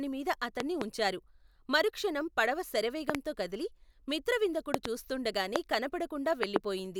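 A likely voltage glitch, such as a switch or static discharge, injects loud pops about 20 dB above the speech: double pops at 0.60–0.84, 3.10–3.17, 4.74–4.88 and 6.43–6.58 s, and a single pop at 5.56–5.58 s.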